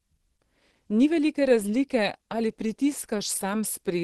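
Throughout the speech, the sound is muffled and hoarse. Nothing is present above 12.2 kHz, so the top of the spectrum is cut cleanly away. The damage is plainly audible from start to finish. This is likely Opus compression running at a low rate, which fits about 16 kbps. At such rates the encoder narrows its bandwidth and moves to its hybrid speech mode. That mode codes the lower band with SILK, giving the hoarse, dulled character heard here.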